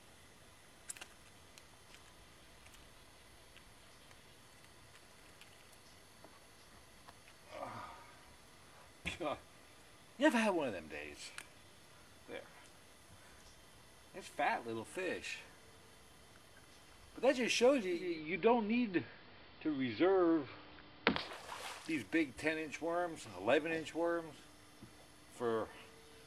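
A hybrid receiver lost its digital signal and blended to the station's AM broadcast from 17.9 to 21.5 s, a case of digital radio blending to analogue. Over a 0.33 s cross-fade the level shifts by about 2 dB, and hiss rises to roughly 30 dB below the signal.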